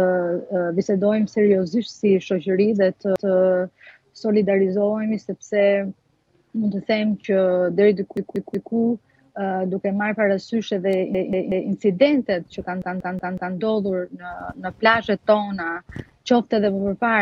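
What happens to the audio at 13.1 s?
At 13.1 s the audio is in the middle of a repeated buffer fault running from 12.82 to 13.56 s. New data failed to reach the output in time, so the device replayed its last block of about 186 ms, which fits an 8192-sample buffer. That block plays four extra times, heard as a rhythmic stutter with a hard join at each repeat. Playback then resumes with essentially nothing skipped.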